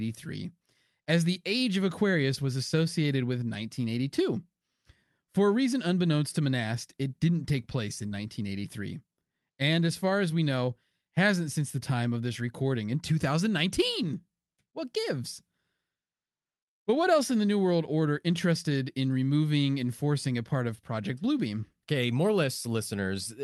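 Short concealed packet loss at 8.07 to 8.13 s in this speech recording, just after "didn't take place in": about 40 ms of audio never arrived in time, so the decoder stretched the preceding sound to cover the gap, leaving a brief smear.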